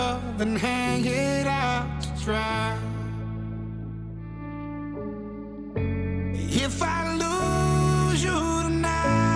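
No technical faults are audible anywhere in the recording.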